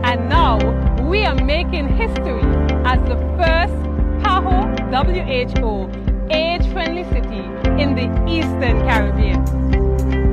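Nothing stood out on listening; no technical fault could be heard anywhere in the recording.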